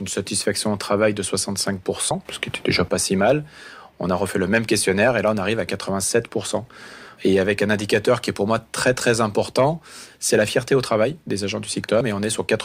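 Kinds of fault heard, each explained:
Audio missing between chunks: at 2.11 s and 12.01 s the sound skips forward, with around a twentieth of a second gone each time and the two sides butted together without any gap of silence. The likely cause is a recorder or processor handling the audio in blocks and dropping a short stretch at each handover, with the timing fitting 5-second chunks. The result is a brief jump in continuity rather than a dropout.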